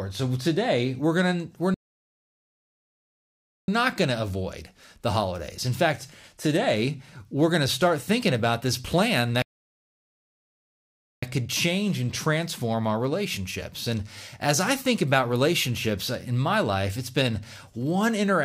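At 1.74 s the speech just drops out and stays silent until 3.68 s, then again from 9.42 s to 11.23 s, roughly 1.9 s and 1.8 s each. That's a playback stall, likely the player starving for data or getting blocked before picking back up.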